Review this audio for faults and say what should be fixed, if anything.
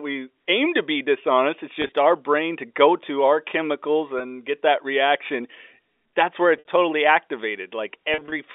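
Packet loss with pitch repetition occurs at 1.82–1.92 s, 4.19 s, 6.57–6.67 s and 8.14–8.32 s. Each gap is filled by repeating the last pitch period, so the shorter gaps briefly hold with a buzz, while the longest run, at 6.57 s, fades into silence before the speech cross-fades back. On a spectrogram this shows as frozen, smeared harmonic bands. On the waveform it appears as identical repeating cycles. Fixing the network path or adding forward error correction would prevent it.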